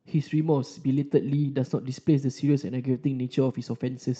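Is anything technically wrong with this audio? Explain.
Yes. There is clock drift between sender and receiver across the whole clip: the sending clock runs fast by around 4 percent. The receiver's jitter buffer keeps overfilling, so it must discard audio to keep up. Unlike packet-loss gaps, nothing goes silent; the speech just feels faintly rushed and uneven.

The repeated timing corrections fall between 0.23 and 3.77 s, where the buffer trims small slices to play at about 104 percent pace. The cuts all go one way and are spaced irregularly, heard as slight hiccups rather than the steady pitch rise of a simple speed change. The Opus call path keeps its 8 kHz bandwidth.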